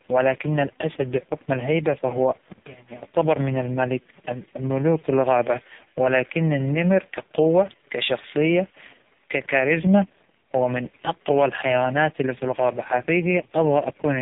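The whole clip carries heavy AMR narrowband mobile codec damage. Nothing passes above 3.8 kHz. The speech sounds buzzy and synthetic, which fits a very low bitrate near 5 kbps.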